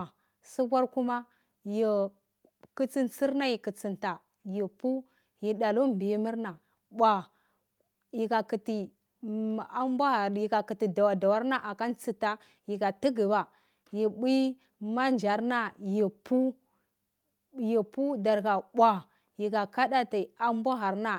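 No technical faults can be heard anywhere in the signal.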